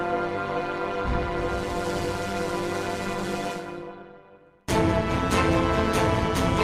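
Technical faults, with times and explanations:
Throughout, overlap-add ripple: the level swings by about 11 dB, around 200 times a second. Frames were rejoined unevenly, so the gain pulses per frame as a metallic buzz with extra tones.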